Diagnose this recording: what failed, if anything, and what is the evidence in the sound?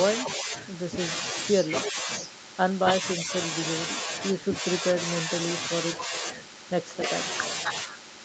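An echo leak runs from 0.25 to 1.92 s: a delayed copy of the speech trails the original by about 321 ms, roughly 10 dB down. This is a call-processing fault, likely a loudspeaker-side echo canceller letting part of its microphone pickup through so it was sent back. The fixed lag and the copy being a repeat of the same speech, not a smeared tail, separate it from room reverberation or a codec pre-echo.

Speech suppressed in double talk appears twice: briefly from 0.37 to 0.54 s, and in scattered dips between 1.86 and 7.11 s, under a second in total, each pulling the level down by around 5 dB. The likely cause is the same call-processing stage: an echo canceller facing simultaneous talk and ducking its own talker with the echo. These are shallow level dips, not hard silences, and they fall where the other side is active, which rules out packet loss or jitter-buffer gaps.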